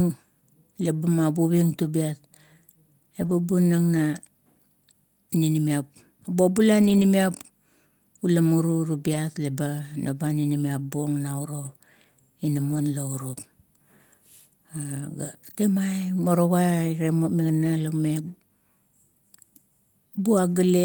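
Lost packets rebuilt from error correction occur at 1.83–1.85, 3.21–3.31, 6.81–7.03, 9.13–9.15, 11.65–11.67 and 12.71–12.77 s. Low-bitrate copies fill each gap seamlessly but sound rougher and noisier, with smeared, grainier harmonics on a spectrogram and no waveform dropout.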